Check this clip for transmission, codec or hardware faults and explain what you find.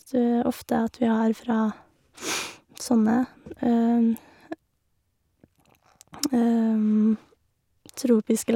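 No transmission, codec or hardware faults can be heard anywhere in this speech recording.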